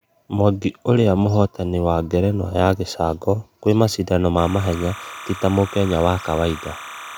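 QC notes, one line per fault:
4.38 to 7.18 s, timecode bleed: after "ya gĩcango kwĩ mashidano", a chirping warble sits roughly 15 dB under the speech to the end. Linear timecode is leaking in from an adjacent line, its square wave flipping between roughly 1 and 2 kHz, consistent with 29.97-frame code.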